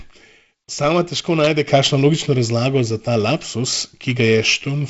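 Nothing to flag here: the speech comes over G.722 wideband telephone coding at 48 kbit/s, so there's a light coding hiss and a bit of extra grain in the lower band, with nothing heard above 7.7 kHz, and that's simply how this path sounds rather than anything going wrong.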